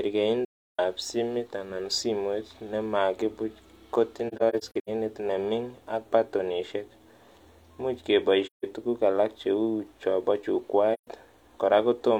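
The speech drops into soft-edged holes at 0.45–0.79, 4.28–4.89 (broken into short gaps), 8.46–8.65 and 10.93–11.07 s. That's AAC frame loss with muting: the decoder zeroes the lost frames, and the overlapping windows fade the sound out and back in.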